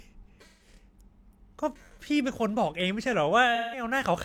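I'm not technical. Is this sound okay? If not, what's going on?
No, there are three problems in this speech clip.

From 0.48 to 0.68 s, and again from 3.55 to 3.83 s, there is AAC frame loss with concealment. Small chunks of the compressed audio went missing. The player guessed the gaps from the sound just before, so each patch sounds smeared and noisy.

Between 2.80 and 3.14 s there are CD scratch ticks. Three tiny clicks come at a steady rhythm, the longest lasting about a millisecond. A damaged spot on the disc passed under the reader on each turn, and the player covered the bad sound.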